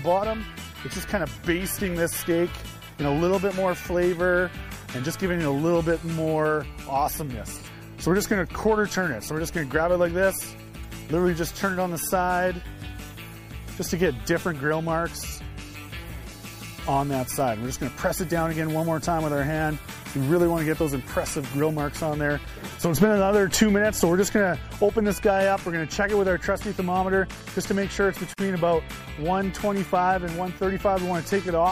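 Throughout, the sound is watery and swirly, with metallic chirps on sibilant and cymbal-like detail. This is plainly audible damage, likely MP3 compression at a rate that fits about 64 kbps. Weak frequency lines flicker on and off between frames, which sets it apart from a plain low-pass filter that dulls the sound evenly.

At 28.34 s a gap of 47 ms opens in otherwise continuous sound: a gap at a join of encoded pieces, where separately encoded segments were joined with their start delay and end padding left in. Unlike a dropout, nothing is lost; the sound resumes exactly where it stopped, and the codec smears both edges of the gap.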